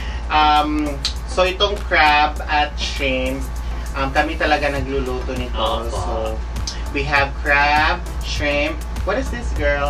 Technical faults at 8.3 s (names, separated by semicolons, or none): none